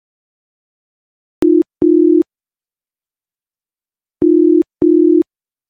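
A short sound clip with a cut-off start: it sits in dead digital silence until about 1.42 s, then drops straight into the middle of a sound with no attack or fade-in at all. That's what you get when the recording or stream kicks in late and misses the real beginning.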